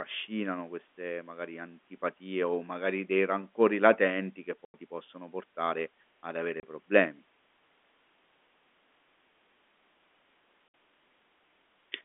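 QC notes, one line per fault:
4.65–4.74 s, 6.60–6.63 s, 10.69–10.72 s: packet loss filled with silence. Gaps of 90, 30 and 60 ms (after "dei rancori latenti che" and just before "ti possono portare ad") fit 30 ms packets replaced by dead silence, with hard edges rather than the smeared or repeated sound of concealment.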